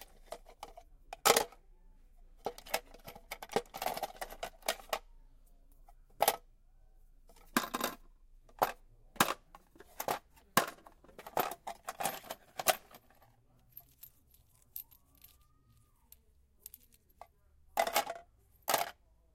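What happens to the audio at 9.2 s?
At 9.2 s the audio plays through intact, with no dropout, click, distortion or other fault.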